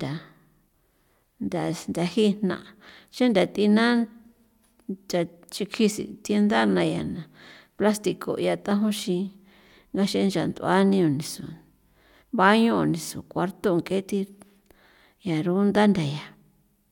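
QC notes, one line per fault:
Nothing stood out on listening to this speech recording.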